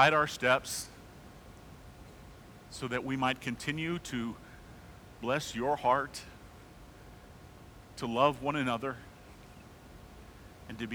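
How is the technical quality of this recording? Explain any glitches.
No glitches turn up anywhere in the recording, and the only thing in the background is a little room noise sitting about 21 dB below the speech, which is just the space the microphone was in.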